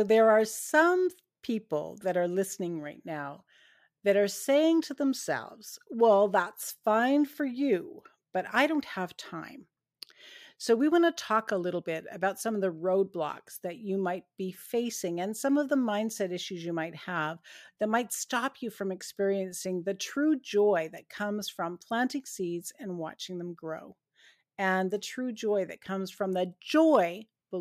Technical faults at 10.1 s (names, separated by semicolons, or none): none